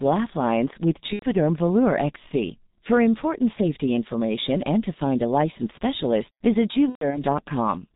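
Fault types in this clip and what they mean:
G.723.1 codec: This is a very low-rate telephony codec that codes the sound in 30 ms blocks. Here the damage is heavy, and the thin, narrow sound fits a rate near 6.3 kbit/s. Nothing above 4 kHz survives, so the speech is muffled throughout. The voice model updates slowly, which makes it hoarse and rough. Consonants smear into each other and lose their edges. This holds for the whole clip.
VoIP packet loss concealed by the speech codec: Packets went missing, and the decoder filled the gaps by repeating its last pitch and filter settings at falling gain. At 1.13 to 1.25 s about 90 ms is patched, which fits three lost frames. At 6.89 to 7.23 s the losses are scattered, about 150 ms in all, with a longest run near 120 ms. The speech is stretched into a buzzy tone or coloured noise and fades there. It stays weak for a moment after the losses end.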